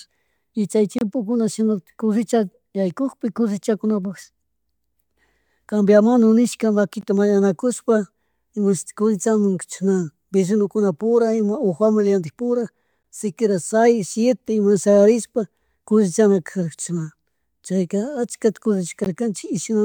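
Gaps at joins of encoded pieces open at 0.99–1.01 s (about 27 ms), then at 7.01, 13.03 and 19.04 s (16 ms each), recurring every 6 s. The speech appears to have been encoded in separate pieces and joined untrimmed, so each encoder's start-up delay and final-frame padding remain as silence. Each gap is a brief, abrupt dropout in continuous speech, its edges smeared, before the sound resumes where it stopped.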